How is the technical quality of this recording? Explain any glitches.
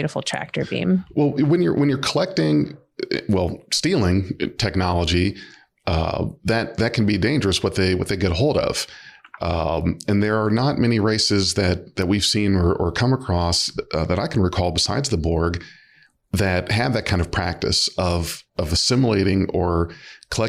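No glitches turn up anywhere in this recording, so there's nothing here to explain.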